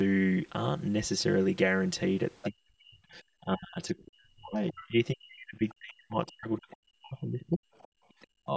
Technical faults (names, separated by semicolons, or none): channel delay (comb filtering); other side's voice leaking through; speech suppressed in double talk; background gated by the echo canceller